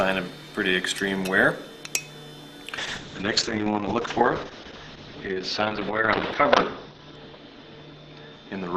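From 2.79 s to the end, a call bitrate drop makes the sound turn muffled, rough and watery. The top end falls to about 6 kHz, which fits a fall from around 128 kbps to roughly 7 kbps. Unlike a simple low-pass filter, it adds coarse coding grit, and unlike packet loss there are no gaps.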